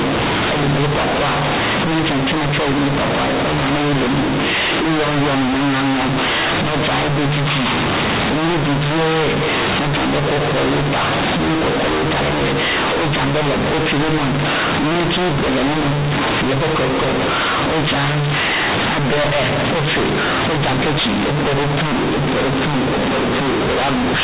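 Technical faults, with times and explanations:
Throughout: companded audio read as linear. The telephone-coded A-law bytes are being played back directly as plain 8-bit samples, skipping the expansion step that should undo the logarithmic scale. Every change of sign in the speech throws the output across roughly half its range, so quiet passages come out as loud as the peaks and the waveform is badly bent. The result is very loud, buzzy distortion over the 4 kHz telephone band, with heavy noise filling the pauses.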